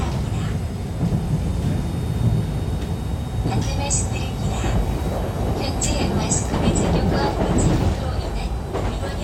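No technical faults can be heard anywhere in the sound, and the signal holds steady from its first moment to its last.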